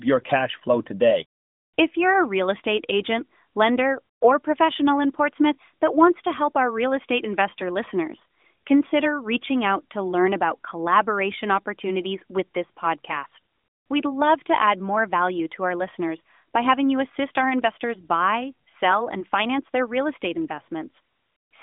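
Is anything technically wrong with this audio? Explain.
No, nothing is wrong: this is speech over a mobile AMR-NB link at what sounds like 12.2 kbps, confined to roughly 150 Hz to 3.6 kHz with nothing above 3.7 kHz, and the light coding texture that comes with it is normal for that channel.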